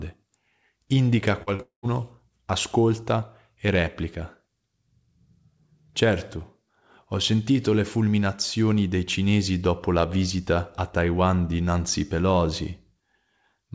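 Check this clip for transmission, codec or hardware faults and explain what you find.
Yes, there are three transmission faults, all packed into the first two seconds of this speech: two short concealed packet losses followed immediately by a long network dropout. The audio travels a call path whose band stops at 8 kHz, which fits a G.722 stream at 64 kbps.

Short concealed packet loss, at 1.43–1.50 s and 1.56–1.62 s. Each time, about 30 ms of packets failed to arrive before playout was due. The receiver covered each gap by extending the preceding sound, for 39 ms the first time and 31 ms the second, then crossfaded back into real audio. Each repair is heard as a brief smeared wobble in the speech, and the two sit only a few hundredths of a second apart.

Long network dropout, 1.62–1.87 s. Here the stream most likely stalled for roughly 210 ms, straight after the second short loss. Concealment carried the last sound forward as a fading buzz or hiss, which then gave way to about 120 ms of near-silence. 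When speech resumes with "ascolta e", it is slightly ahead of where it should be, because around 8 ms of audio was never played. The result is an audible hole that sounds like a cut.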